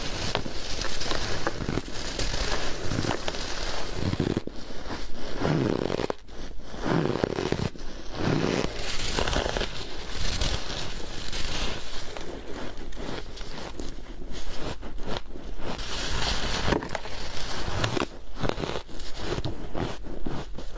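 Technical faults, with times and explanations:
No technical faults are audible anywhere in this audio.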